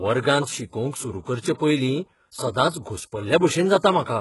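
HE-AAC compression runs throughout this speech clip, from start to end. Nothing is present above 11.5 kHz, and the heavily damaged, synthetic-sounding treble likely comes from spectral band replication copying lower bands upward, which fits a very low bitrate of about 12 kbps.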